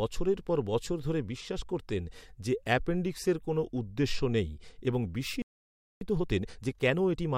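A playback stall hits at 5.42 s: the speech cuts off mid-flow and the output stays silent until 6.01 s, a gap of about 0.59 s. Nothing fades or decays into the silence; the sound simply stops, as though a tap had been turned off. The likely cause is the player running dry of buffered audio, or its output thread being held up, so there was nothing to send to the device until it recovered.

Time-compressed catch-up follows from 6.01 s to the end at 7.38 s. Having fallen behind, the player works off the backlog by dropping small slices of audio and cross-fading across each join. The speech therefore runs at 1.25 times its normal rate, hurried and clipped, yet keeps its normal pitch.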